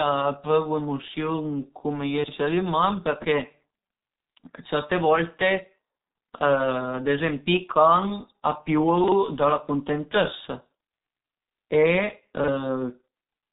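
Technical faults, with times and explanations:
throughout: G.723.1 codec. The speech is band-limited with nothing above 3.8 kHz, so it sounds muffled, and the heavy coding damage gives a hoarse, rough texture. The codec works on long frames and updates its model of the voice slowly, so fast transitions get smeared and consonants lose their crispness. The degree of damage is consistent with a rate around 6.3 kbit/s, typical of early internet telephony.
2.24–2.32 s and 9.04–9.12 s: chunks out of order. At each point a 40 ms chunk plays one position late, after the chunk that should follow it. No audio is missing, but the two segments are swapped. Each span therefore has three hard joins: at its start, at the swap point and at its end. These produce a brief jumbled moment in the speech.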